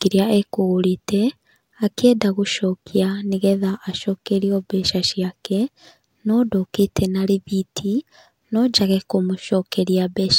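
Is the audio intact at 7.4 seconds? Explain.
Yes, at 7.4 seconds the speech runs through cleanly with no dropout, click, distortion or other fault to be heard.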